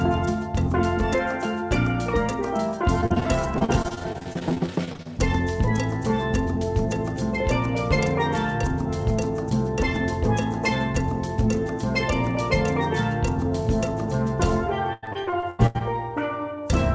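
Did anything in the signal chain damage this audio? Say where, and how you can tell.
Yes, repeated packet loss on the network leg. From 3.01 to 5.07 s, and again from 14.93 to 15.83 s, the audio turns choppy and robotic as short dropouts, up to 93 ms, are patched by stretching the preceding sound through the G.722 call path's concealment.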